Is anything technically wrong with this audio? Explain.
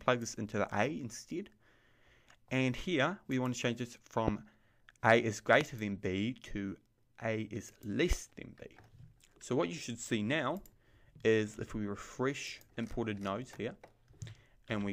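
Yes. A brief electrical pulse, likely from a switch, plug contact or static discharge, is entering the signal path three times, causing a loud pop at 4.28–4.30 s, 5.61–5.63 s and 8.13–8.15 s. Each sharp pop lasts about 20 ms and sits over the continuing sound, the first two about 20 dB above it and the third about 10 dB.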